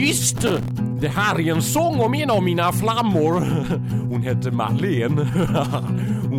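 A burst of gritty crackle tears through the audio from 0.37 to 0.71 s. This is processor overload crackle: the system kept missing buffer deadlines, and each miss dropped in a hard-edged silent gap. The rapid texture points to buffers of a few milliseconds, with dozens missed over that stretch.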